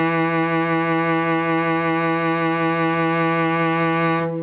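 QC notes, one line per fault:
Throughout, gain pumping: quiet parts swell up between loud sounds and duck by about 15 dB under each one, so the music sounds squashed, with loud and soft parts crowded together. Likely cause is input gain set far too high, with a fast limiter clamping every peak.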